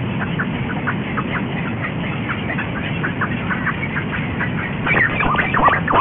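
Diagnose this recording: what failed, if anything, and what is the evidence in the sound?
Aliasing at the sample-rate conversion stage: the audio was taken from 48 kHz down to 6 kHz without an anti-aliasing filter. Everything above 3 kHz folds back below it, so gritty, metallic tones about as loud as the sound itself run throughout.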